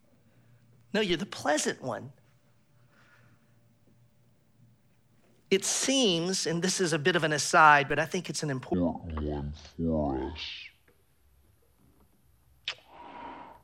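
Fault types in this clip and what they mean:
DC step: a sudden low thump at 1.1 s and again at 7.90 s, as the waveform's zero line jumps and then decays away.
Section at the wrong speed: from 8.74 s to the end, the speech drops about ten semitones and drags, likely played back at 0.552 times its recorded speed.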